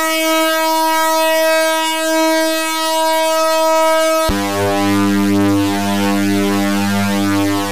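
A thin, steady hiss sits on the sound from the start to 1.5 s, bright and climbing sharply toward the top of the band, with the noise only about 15 dB below the signal. This is low bit depth with noise shaping: the audio was reduced to 5 bits, and the rounding error from that coarse quantisation was pushed upward in frequency by error feedback, so it collects as treble hiss instead of a gritty, even noise.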